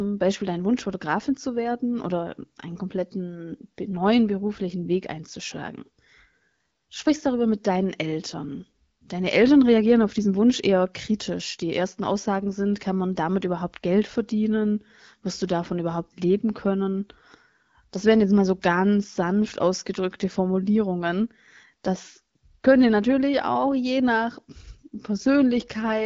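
Speech with no audible faults.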